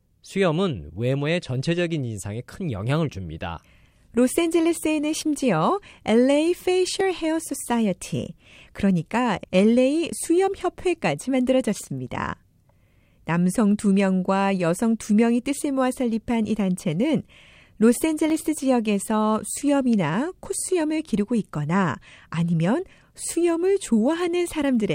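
At 7.01, 12.07 and 18.3 s the speech has a single sharp click, each a thin vertical line across the spectrum, likely dropped samples: under a millisecond goes missing, so the waveform jumps.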